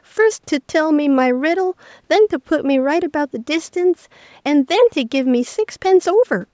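Nothing here counts as a fault: the speech just carries the usual mark of a call's microphone processing, with the lowest bass trimmed away and nothing above 8 kHz, which is how that path normally sounds.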